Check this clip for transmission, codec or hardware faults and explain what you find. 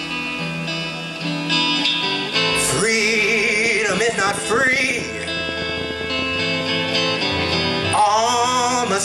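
A train of clicks runs from 3.66 to 6.62 s, likely from interference or a faulty connection or power supply injecting a pulse. About forty similar clicks arrive unevenly at 13.2 per second, peaking about 5 dB above the sound, heard as ticking.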